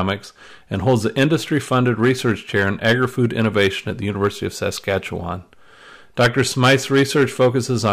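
Hard clipping runs right through the speech: it's pushed about 12 dB too hot, so a small share of peaks get sheared flat, giving a gritty crackle on loud syllables.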